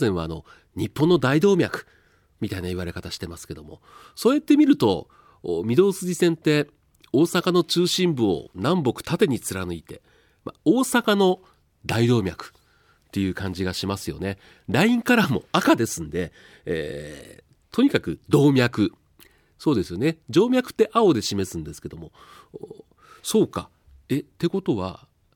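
No technical faults can be heard anywhere in this speech recording. The sound stays steady and continuous throughout, with no moment that stands apart from the rest.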